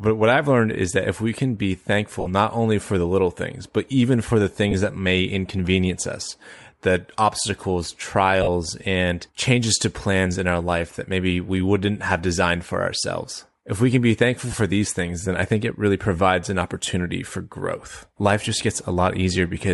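Throughout the speech there is a breathy, grainy edge on the upper frequencies, plainly audible, where fine detail is replaced by a noisy texture. This is likely Bluetooth LC3 compression, whose character fits roughly 48 kbps with short 7.5 ms frames.

Brief smeared, noisy blips interrupt the speech at 2.20 s (about 53 ms), 4.71 s (about 23 ms), 8.43 s (about 45 ms) and 14.51 s (about 23 ms). These are lost LE Audio frames: the decoder reused the last spectrum with scrambled phase to fill each gap.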